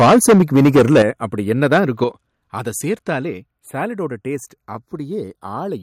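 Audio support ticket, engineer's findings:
Microphone overload, 0.00–1.02 s: harsh crackle on the loudest speech peaks, about 13 dB over full scale, roughly a fifth of samples flattened. Likely input gain set too high at the converter. Second burst, 1.62–2.04 s: milder, about 4 dB over, only a small fraction clipped. Unlike codec distortion, the grit tracks peak level only and stops when level drops.

Microphone volume stepped down, 1.02 s: abrupt drop of 8 dB in speech and background together, right after the first overload. Likely the call software's automatic input-gain control reacting to clipping. Repeats at 2.04 s (6 dB, again after clipping) and 3.30 s (3 dB, just before "சாலட்டோட டேஸ்ட்"). Unlike a fade or noise gate, the level changes in one instant step and the noise floor drops with it.

Channels drifting apart, throughout: slow flanging sweep when summed to mono, as comb notches move through the spectrum. 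The inter-channel delay slides to about a third of a millisecond by the end. Probable cause is two capture devices on independent clocks, with a mismatch of around 70 ppm. A fixed offset would give static coloration. Here the sweep keeps moving in one direction and never cycles back the way a modulation effect would.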